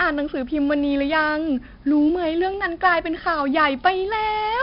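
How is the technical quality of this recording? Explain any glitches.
The recording is heavily degraded by 4-bit ADPCM compression throughout the speech. Each sample is coded as a coarse step from a prediction, so a gritty hiss rides on every loud syllable and swells and fades with the level, unlike steady tape hiss. Sharp onsets smear where the step size lags, and nothing is heard above 5.3 kHz, which points to a rate around 44 kbps.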